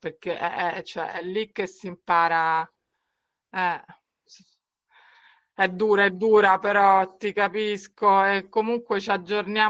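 Speech with Opus voice compression throughout. The SILK coder's coarse excitation coding makes it plainly muffled, hoarse and slightly robotic, which points to a low bitrate of about 12 kbps. A spectrogram shows a hard ceiling at 9.7 kHz, with nothing above it.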